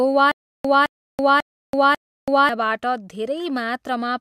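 From 0.32 s to 2.49 s the speech falls into a stutter with silent gaps: a 214 ms fragment plays four times, each followed by about 330 ms of dead silence, a 544 ms cycle. It's likely a stalled stream replaying its last buffer, so the real audio there is lost.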